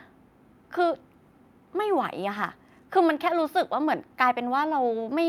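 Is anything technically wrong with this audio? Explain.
No, nothing technically wrong turns up here, and the speech comes across without any problems worth pointing out.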